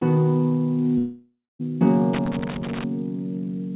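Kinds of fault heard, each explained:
Long network dropout: Between 0.98 and 1.61 s the sound turns into a buzzy continuation of what came just before, fading over a few tenths of a second into near-silence for about the last 0.24 s. Audio then resumes with roughly 0.62 s of material gone, likely because the receiver was filling in for a long run of lost packets. The waveform shrinks toward a flat line, and the spectrogram shows smeared, repeating bands decaying into a blank gap.
Loose connector crackle: From 2.13 to 2.84 s there is an irregular burst of crackling and scratching, the sound of a worn or dirty contact making and breaking rapidly. Each break chops the signal. The waveform shows jagged spikes and brief notches scattered unevenly through that stretch. On the spectrogram they appear as thin vertical broadband streaks cutting across the 4 kHz-limited band of the call audio.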